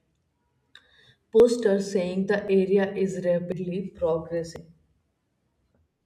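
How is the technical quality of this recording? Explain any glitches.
Four abrupt skips break up the speech, each consistent with a dropped buffer (overrun). They fall at 1.4 s (just before "saying the"), 2.48 s (just after "saying the"), 3.52 s and 4.56 s. Each is a small jump in the sound, as if roughly 40 ms went missing, or about a tenth of a second at 3.52 s. The likely cause is samples being overwritten before the software read them, so the two sides are spliced with no gap. A waveform would show a sudden discontinuity, and a spectrogram a thin vertical broadband line where the sound changes without any silence.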